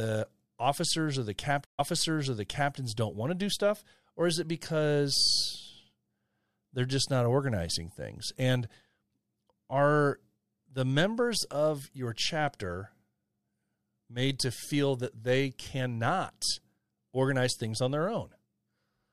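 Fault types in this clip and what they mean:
Stream reconnect: The connection dropped, the player went silent and restarted its decoder mid-stream. After "officers or the" at 1.65 s, 135 ms of silence follows. The speech then resumes 0.98 s earlier, repeating material before "don't want to do" near 2.76 s.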